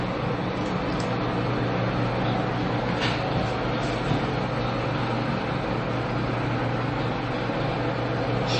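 Throughout the clip, the likely cause is MP3 compression at a starved bitrate, around 32 kbps. The encoder removed everything above 8.3 kHz and let weak frequency lines flicker between frames, leaving the sound dull, watery and swirling, with smeared attacks.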